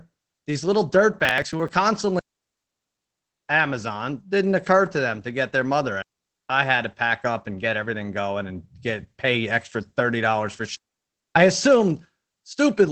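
Right from the start the whole speech clip carries Opus voice compression, and it's plainly audible. Nothing comes through above about 8.4 kHz, so the top is cut at wideband, and the speech has that slightly hoarse, muffled, faintly robotic edge you get when SILK's linear-prediction coder is starved and the excitation gets coded roughly. The amount of damage points to a low rate, something around 12 kbps, in 20 ms frames.

Between 1.2 and 1.69 s there's a processor overload crackle. That's a gritty tearing riding on the speech for about half a second. What's happening is the processor keeps failing to finish its little buffers on time, and each late one just gets skipped, leaving a tiny hard-edged gap. The rhythm fits buffers of roughly 10 ms, with something like fifteen of them missed over that stretch, and the crackle stops once the load clears.

Then there are three digital wireless dropouts, where the link loses too much data and the receiver simply mutes. 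The first runs from 2.19 to 3.49 s, a full 1.3 s hole. The second runs from 6.02 to 6.50 s, just under half a second. The third goes from 10.76 to 11.36 s, about 0.6 s. Each one is a clean drop to near silence behind a very quick fade, with no burst of noise on either side.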